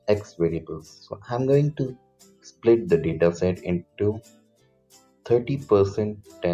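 A speech-oriented noise suppressor has been left running on this audio, and it treats steady tones, ambience and decay as noise. Across the clip its gain keeps swinging by roughly 15 dB, so sustained material thins and flutters while attacks pass largely intact. That swing distinguishes it from a compressor: a compressor pumps in step with loudness, while this reacts to how stationary the sound is, holding back quiet sustained passages as readily as loud ones.

The sound is cut by the noise suppressor at five points: 0.24 to 0.39 s (about 13 dB down), 0.61 to 1.3 s (about 9 dB), 1.95 to 2.65 s (about 16 dB), 3.83 to 4.0 s (about 13 dB) and 4.21 to 5.26 s (about 16 dB). Each is a sinking of held sound or a truncated tail rather than a hard dropout. The level slides down without going silent, and any sharp onset inside those spans still cuts through.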